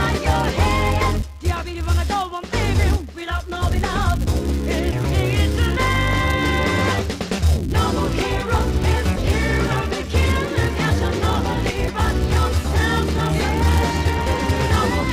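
A filter restarted on every block runs through the whole of the audio: the processing stage drops its internal state at each block boundary and begins again from silence, so every block opens with a small transient. Those transients repeat at about 188 Hz, heard as a steady buzz that rises and falls with the level of the sound, a rate that fits a 256-sample block.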